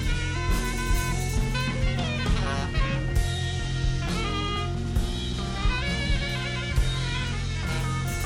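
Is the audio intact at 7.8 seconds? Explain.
Yes, the music at 7.8 seconds plays through intact, with no audible fault at that moment.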